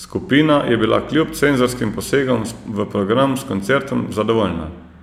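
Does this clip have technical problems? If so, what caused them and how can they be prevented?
Yes. Single sharp clicks at 1.18, 3.41 and 4.28 s are likely dropped samples, with a couple of samples skipped so the waveform jumps. Unlike a dropout, no sound goes missing. Keeping capture buffers large enough prevents it.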